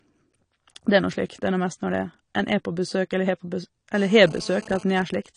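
Throughout the clip the speech sounds dull and smeared, with plainly audible codec damage and nothing above 10 kHz. This is likely AAC compression: AAC-LC quantising each frame's spectrum coarsely and lowering the cut-off, which fits a low bitrate around 32 kbps.

From 3.95 to 4.83 s a hard, raspy GSM phone buzz sits at 217 Hz with many harmonics, about 22 dB below the speech and unrelated to it. A nearby 2G phone in a call transmits bursts 217 times a second, and the audio circuit rectifies those radio pulses.

From 4.90 to 5.26 s the buzz gives way to GSM signalling bursts, roughly 20 dB below the speech: even ticks with a longer 217 Hz buzz twice a second. The phone's user has gone silent in the call, so it sends only short groups of bursts, which the circuitry again rectifies.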